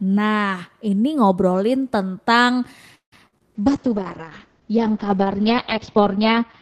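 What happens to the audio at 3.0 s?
Packets were most likely held up in transit, leaving the receiver's jitter buffer empty and producing a call audio freeze from 2.95 to 3.14 s. The receiver stretches the last sound into a short fading buzz, then about 110 ms of silence, roughly 170 ms of filler in all. When the packets arrive, the audio resumes exactly where it stopped, so nothing is lost, but everything after runs about 170 ms later.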